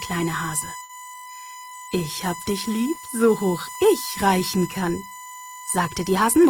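USB whine runs from the start to the end of the clip as a steady, fixed-pitch tone at 1 kHz, sitting only roughly 15 dB below the sound itself. The USB bus pulls current in 1 ms frames, and that 1 kHz pulsing has leaked into the audio through the shared power or ground, leaving a constant whine under everything.

A short stall from a late packet occurs between 0.83 and 0.91 s. A packet failed to arrive on time, the jitter buffer ran dry, and the receiver held the last bit of sound for about 60 ms until the data turned up. Playback then resumed where it had stopped, so nothing is lost, but that moment is audibly drawn out with a slight buzz or dip, and everything after it runs about 60 ms later.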